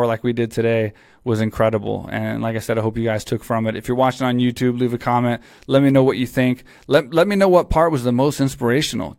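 No technical faults can be heard anywhere in this speech recording. The sound runs on without any break, jump or change in level.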